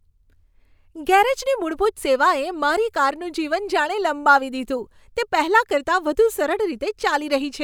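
Nothing stood out on listening to the speech here.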